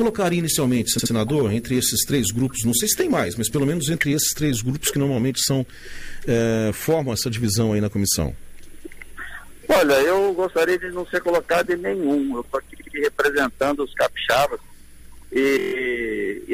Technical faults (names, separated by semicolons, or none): repeated frames